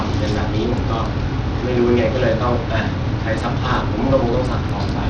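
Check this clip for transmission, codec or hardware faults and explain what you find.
There's one fault here, and it runs the whole length of the speech: it sounds like Bluetooth SBC compression was likely in the chain. SBC splits the signal into a handful of wide bands and hands out bits without any real model of hearing. At a tight setting, which fits something around 80 kbps, the top bands get starved. Nothing survives above about 9.6 kHz, so the speech is dull, and there's an obvious gritty, grainy edge on the sound.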